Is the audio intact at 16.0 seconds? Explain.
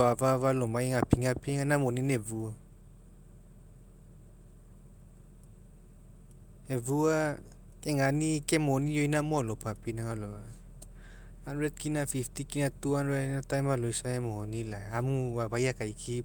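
Yes, at 16.0 seconds the audio is intact, with no dropout, click or distortion at that point.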